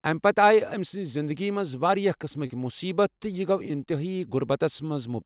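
From 2.46 to 2.52 s the speech briefly smears into a wobble as the preceding sound is stretched on. This is short concealed packet loss: 40 ms arrived too late, and the receiver synthesised 37 ms from earlier audio before blending back, within a 4 kHz call band.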